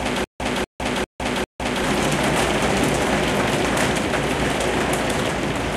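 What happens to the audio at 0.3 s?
At 0.3 s the clip is already caught in a stutter with silent gaps, running from the start to 1.84 s. A 0.24 s fragment repeats four times every 0.40 s with 0.16 s of dead silence between, likely a stalled stream replaying its last buffer. The waveform shows identical blocks separated by flat silent stretches.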